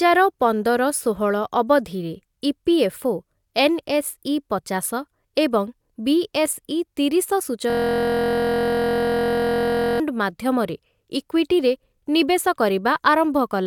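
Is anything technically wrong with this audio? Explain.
Yes, there's a system hang loop from 7.70 to 10.0 s: playback froze and one 23.2 ms chunk of the speech kept repeating, fitting a 1024-sample buffer, so you hear a steady buzz at about 43 Hz.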